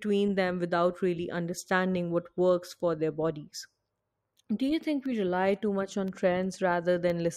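From 5.06 s to 7.10 s, ticks break into the speech about three times, 1.02 s apart. These are periodic USB or driver dropouts: at each regular stall of the audio path, a sliver of signal far shorter than a millisecond is replaced by silence.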